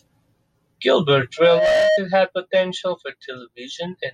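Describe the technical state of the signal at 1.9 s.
At 1.9 s a loudspeaker feedback squeal is sounding, from 1.37 to 2.01 s. The microphone is re-amplifying its own loudspeaker. A single 625 Hz tone swells over roughly a third of a second and sits several decibels above the speech.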